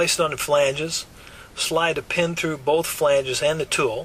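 Nothing here trips the ear at all; no technical faults turn up anywhere in the clip.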